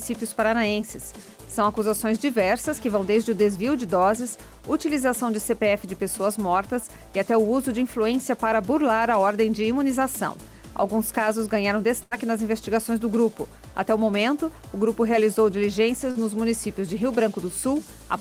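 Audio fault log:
12.03 to 12.13 s, burst of packet loss: roughly 80 ms of the stream, several packets in a row or one long one, failed to arrive in time to be played. For about 76 ms the receiver kept extending the last sound it had and faded it down as the hole went on, which leaves a held buzz or a dying hiss in its place. Playback then picks up later in the stream, and whatever fell inside that gap is gone.
16.11 s, short concealed packet loss: about 40 ms of the stream never reached the decoder in time. The receiver covered the gap by carrying the previous sound forward for about 39 ms, following its pitch where it was voiced and using shaped noise where it was not, then crossfaded back into the real audio. What comes through is a brief smear or wobble, and a very short sound caught in that window can drop out entirely.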